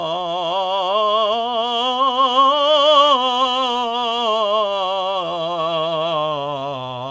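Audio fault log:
The music carries the ordinary coding of a call path, with nothing above 8 kHz, which points to a wideband codec such as G.722 at 64 kbps, and no fault is present.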